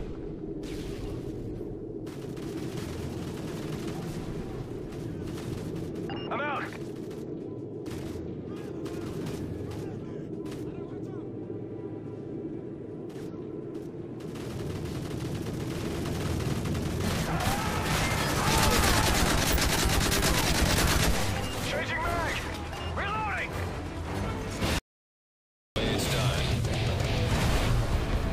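At 24.79 s the sound cuts out abruptly for about 0.97 s, returning at 25.76 s: an audio dropout to silence, likely from the input being lost while writing continued. The waveform goes flat, and the spectrogram shows a blank vertical band with no room tone.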